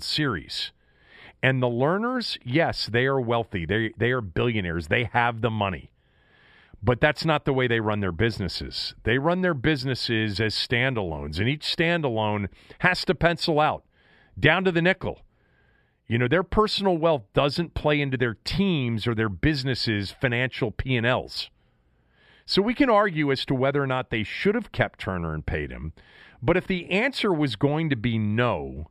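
No technical faults are audible.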